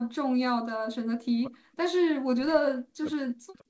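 From the start to 1.95 s the speech repeatedly dips and breaks into fragments, falling by roughly 40 dB at its deepest, for about one and a half seconds in total. After a short clear stretch, the same choppy pumping returns from 2.13 s to the end. This is speech suppressed in double talk, likely caused by an echo canceller that could not tell this talker from loudspeaker echo while the far side spoke, so it attenuated both.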